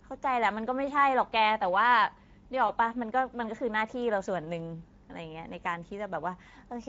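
From the start the speech carries plainly audible Speex codec damage. The CELP coder, running at about 16.8 kbps, has too few bits for the excitation. That leaves the voice hoarse and noisy, and any content above 4 kHz comes out as shaped noise rather than detail.

At 2.67 s one frame of 20 ms drops out, and the speech codec conceals the VoIP packet loss by extrapolating its last pitch and filter at falling gain. The sound is stretched out and fades, and the voice stays weak for tens of milliseconds after about 2.72 s.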